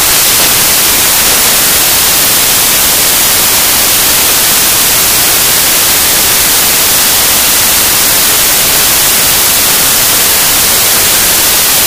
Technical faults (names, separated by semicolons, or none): samples built from the wrong bytes